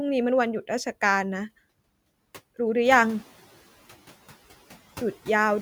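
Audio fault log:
2.84–3.32 s, noise suppressor catching up: the room noise steps up by about 12 dB at around 3 s, and the suppressor's noise estimate still reflects the quieter floor. For a brief moment the louder noise passes with little reduction and sounds like a sudden rise in background noise behind the speech. Over roughly 480 ms the estimate adapts, the noise cut settles at about 8 dB, and the background sinks to about 22 dB below the speech.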